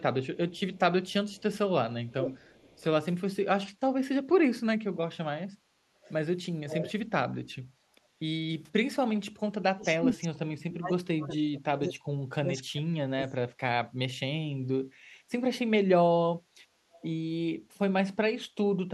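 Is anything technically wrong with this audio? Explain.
Yes, two faults can be heard.

Echo leak: At 0.55–1.42 s, 2.07–2.83 s, 6.04–6.13 s, 6.68–6.92 s, 14.64–14.68 s and 16.94–17.07 s, a delayed copy of the speech trails the original by about 0.48 s. It is barely audible at 0.55 s, and only about 10 dB below the speech at 2.07 s and 6.68 s. The likely cause is a loudspeaker on the far end whose echo canceller left part of the picked-up audio in the signal it sent back.

Speech suppressed in double talk: Between 9.73 and 13.5 s, the talker's speech drops in level, at worst falling by about 35 dB. It is affected for roughly 3 s in total. This likely happened because both sides spoke at once. The echo canceller could not tell the local talker from the loudspeaker echo, so it attenuated both.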